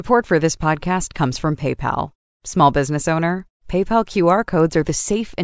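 From 2.8 s to the end at 5.43 s, the resampler restarted on every block. Each 100 ms block was converted separately during a 24 kHz to 16 kHz conversion, so every edge carries a small error. The result is a steady 10 Hz ticking that, unlike buffer-underrun clicks, stays rigidly periodic and disappears in pauses.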